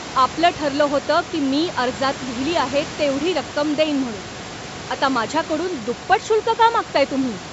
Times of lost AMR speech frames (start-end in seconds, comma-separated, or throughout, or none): none